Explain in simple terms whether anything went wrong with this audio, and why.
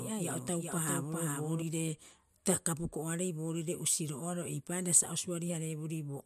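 A doubled audio track runs from the very start of the recording until 1.62 s. During that stretch the speech is heard twice: a second, somewhat quieter copy trails the original by about 0.4 seconds, like a clean echo with no fading tail or room sound. At 1.62 s the copy stops abruptly. The likely cause is the same speech being picked up a second time through a slower route, or an edit that left two out-of-step copies layered together.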